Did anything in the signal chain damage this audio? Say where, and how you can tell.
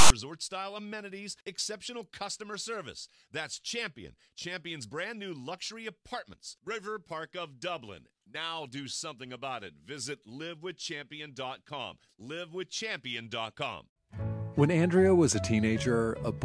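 Yes. At the storage and file-reading stage, the first 0.10 s (0.00 to 0.10 s) is file tags played as audio. It is a hard-edged burst of loud rasp offset to one side, because a block of text tag bytes was decoded as sample values.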